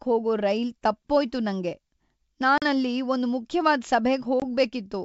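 Packet loss on an ADPCM call at 2.58–2.65 s and 4.40–4.43 s: about 40 ms then 20 ms, roughly two packets then one, drop to abrupt silence. The decoder's predictor and step size lose track of the sender's, so the speech returns briefly slightly distorted over the G.722 wideband coding.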